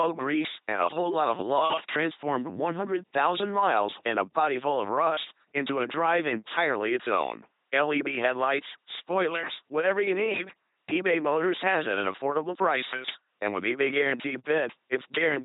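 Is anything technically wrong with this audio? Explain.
Yes. Throughout, the speech has the heavy buzzing, robotic quality of an LPC-10 vocoder, which fits a 2.4 kbit/s stream. Each moment is rendered as either pulse-driven buzz or noise, and nothing survives above 3.8 kHz.

At 1.39 s, between "a whole lot of" and "love transformed", and at 13.10 s, just after "has it at affordable", there is an electrical switching spike. Each is a sharp snap, likely a nearby arc picked up by the line.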